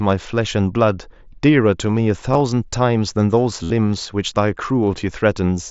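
A speech recording over a Bluetooth headset link suffers concealed Bluetooth headset packet loss, with the wideband mSBC codec adding only a light graininess. Packets from the headset fail to reach the phone twice, and the receiver patches each gap by repeating recent waveform. Around 2.33 to 2.41 s, a few brief scattered losses are almost masked. From 3.63 to 3.71 s, roughly 68 ms goes missing, heard as a buzzy held tone at full level with a slight warble as real speech resumes.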